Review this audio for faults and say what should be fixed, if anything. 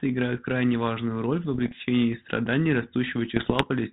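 Bit errors on an ADPCM link give pops and rough bursts at 1.54 to 1.73 s, just after "крайне важную роль в", and again at 3.36 to 3.65 s. Each flipped bit upsets the decoder's step size and predictor, so it rings on. Cleaning up the link or adding error protection would prevent it.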